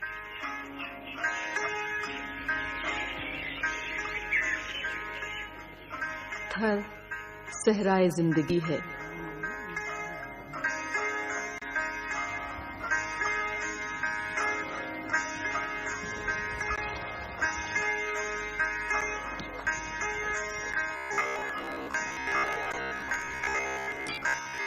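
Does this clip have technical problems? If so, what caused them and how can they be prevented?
Yes. From 20.97 s to the end, robotic sound from repeated short buffers produces a rigid 66.8 Hz buzz. This likely comes from late audio: about half the sound is replaced by repeats of a roughly 15 ms buffer. Prevent it with a larger jitter buffer or more headroom for the audio thread.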